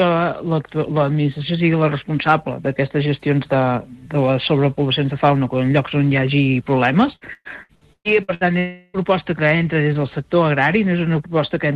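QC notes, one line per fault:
7.15–8.44 s, repeated packet loss (robotic sound): seven separate holes, the longest 118 ms, were each bridged by stretching the preceding audio. About 42 percent of this span is synthetic fill, so the sound turns choppy, with pieces missing.
8.59–8.97 s, long network dropout: a continuous 0.36 s stretch is replaced by a smeared extension of the last sound that never falls to silence. This is likely a longer break in incoming audio, concealed rather than played, before the original resumes.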